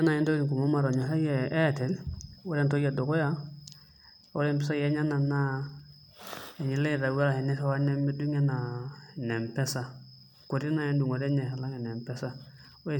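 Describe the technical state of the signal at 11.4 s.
At 11.4 s the speech signal is intact, with no audible fault at that moment.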